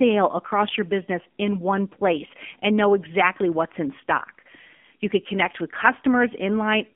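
From start to finish the speech runs through an AMR narrowband mobile codec at 7.4 kbps, band-limited to 200 Hz–3.4 kHz, so it sounds boxy, buzzy and plainly synthetic.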